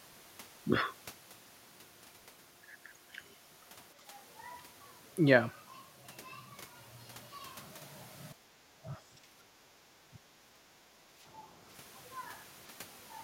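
An echo canceller likely clamped down during double talk, causing speech suppressed in double talk: a slight dip from 3.97 to 4.12 s, then heavy suppression, about 20 dB, from 8.34 to 11.17 s.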